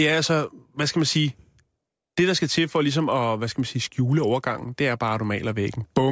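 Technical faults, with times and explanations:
Throughout: resampler restarted on every block. A 25 Hz buzz runs under the speech. It appears only while sound is present and drops away in pauses. The 40 ms period points to conversion done in separate 40 ms blocks, which fits a change from 24 kHz to 16 kHz. Each block was filtered alone, without its neighbouring samples. Every block edge carries a small error, and at this rate the ticks merge into a buzz.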